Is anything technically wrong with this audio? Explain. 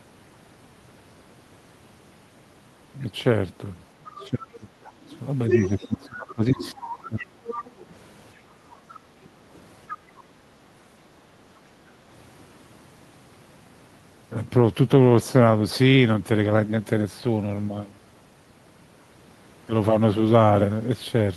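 Yes, there are echo-cancellation faults. From 4.04 to 7.7 s, at 8.94 to 9.26 s and at 9.89 to 9.98 s, the other side's voice leaks through, likely because loudspeaker echo was not fully removed. It sits around 10, 30 and 15 dB below the speech respectively. Across 4.06 to 7.44 s, speech is suppressed in double talk: with both sides talking, the canceller likely turned everything down. The voice dips by up to roughly 20 dB for about two seconds in total. At 7.77 to 7.81 s, the background is gated by the echo canceller, which clamped the microphone briefly, so room sound drops by about 6 dB for a few hundredths of a second.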